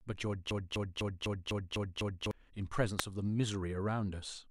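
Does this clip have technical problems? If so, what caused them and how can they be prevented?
Yes. From 0.51 to 2.31 s the speech sticks: a 250 ms fragment plays seven times back to back with no variation, a stutter that sounds like a needle caught in a groove. This broken-record loop likely comes from the player, encoder or stream stalling and resending the last chunk it held, so the speech that belonged in those 1.8 seconds is gone. Larger buffering and a decoder that falls silent, rather than repeating, when data stops arriving would prevent it.

At 2.99 s a sharp snap lands on top of the speech, very brief and separate from it. That is the signature of an electrical switching spike, likely a nearby switch, motor or static discharge arcing and the audio line picking up the burst. Shielded, balanced cabling kept away from switched mains gear and motors would prevent it.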